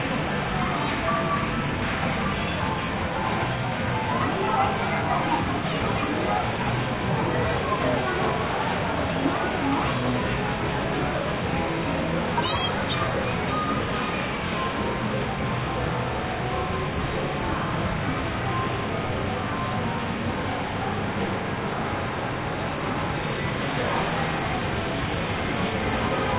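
A recording of everyday sounds, with nothing technically wrong to be heard in it. No fault turns up at any point, so there are no times or causes to report.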